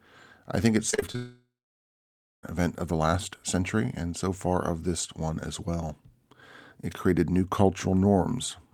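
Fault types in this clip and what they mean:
Repeated packet loss (robotic sound): Just after "I think it's", from 0.90 to 1.15 s, five short gaps break the speech. Each is patched by stretching the previous sound. The longest lasts 30 ms, and 43% of the stretch is patched, so it sounds choppy and robotic.
Long network dropout: From 1.16 to 2.44 s, roughly 1.28 s of speech never arrives. The last sound is carried on briefly, then about 0.97 s of silence follows. Speech resumes at "event of the last". A likely cause is a long interruption in the network stream.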